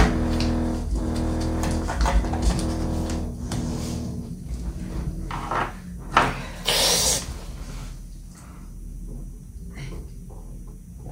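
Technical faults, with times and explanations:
No technical faults can be heard in this audio.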